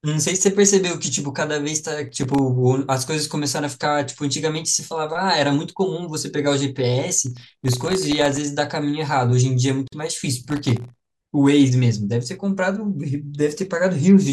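From 2.09 to 2.39 s, and again from 7.27 to 8.37 s, a gritty crackle tears across the speech. This is processor overload crackle: very short buffers, under a millisecond each, repeatedly miss their deadlines and drop out as tiny hard-edged silences. At 9.88 s, an abrupt silence of about 48 ms cuts into the speech, which then picks up where it stopped. This is a gap at a join of encoded pieces, left by encoder delay and end padding that were not trimmed. The same crackle returns from 10.50 to 11.11 s.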